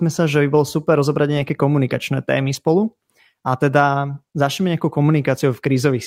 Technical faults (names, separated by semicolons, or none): lost packet rebuilt from error correction